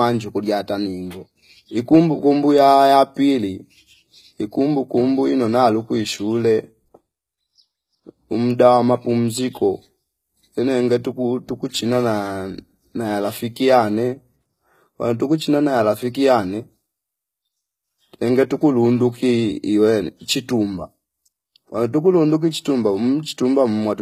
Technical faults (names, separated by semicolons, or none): HE-AAC compression